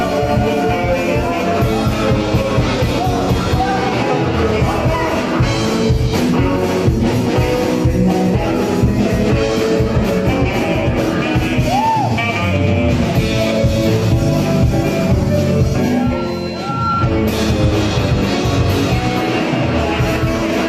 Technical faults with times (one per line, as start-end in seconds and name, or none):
none